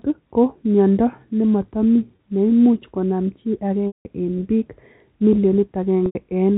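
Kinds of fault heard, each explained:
Packet loss with pitch repetition: three dropouts, near 2.16 s, 3.88 s and 6.06 s, lasting 30, 180 and 90 ms. The receiver fills each gap by replaying the last pitch period. The short one sounds like a briefly held buzz before "neimuch konam chii", while the 180 ms gap after "nematami neimuch konam chii" fades toward silence before "eng piik" returns.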